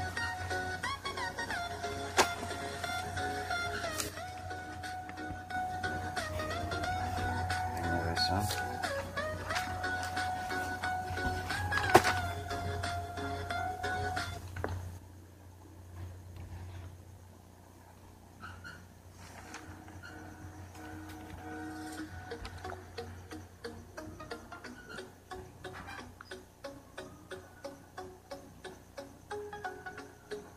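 Right from the start there's a video or display buzz running under everything, a 60 Hz field-rate buzz with a gritty hash on top, sitting roughly 20 dB below the sound. A screen or video cable is coupling into the audio path.

From 4.09 to 5.54 s, and again from 14.98 s to the end, the level drops abruptly by about 6 dB and then holds there. That step is the signature of one channel dropping out, likely with the surviving side then summed to mono, so only half of the shared content remains.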